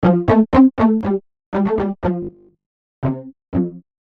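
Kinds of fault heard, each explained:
One channel drops out: from 1.01 s to the end, the level falls abruptly by about 6 dB, likely because one stereo channel was lost before the mono sum.
Robotic sound from repeated short buffers: between 2.23 and 2.97 s the sound becomes a rigid, metallic 50 Hz buzz, likely from a 20 ms buffer replayed for most of that stretch.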